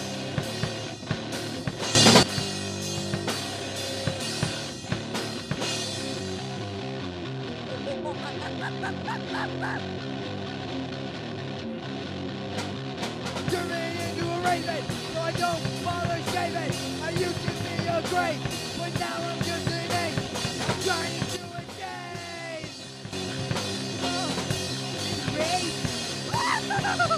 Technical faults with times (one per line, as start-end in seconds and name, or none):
1.95-2.23 sudden gain jump
21.36-23.13 sudden gain jump